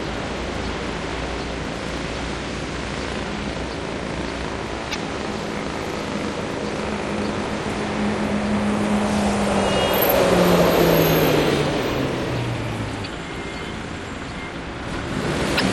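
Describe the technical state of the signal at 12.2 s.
At 12.2 s the sound carries MP3 compression damage, present across the whole clip. The treble is cut off and weak frequency lines drop in and out between frames, giving a watery, swirly texture. This plainly audible damage likely comes from encoding at around 64 kbps.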